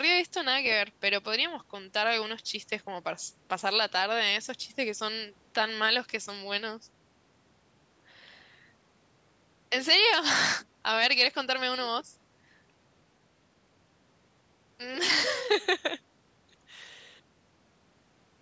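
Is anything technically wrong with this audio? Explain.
No, nothing is technically wrong with this speech.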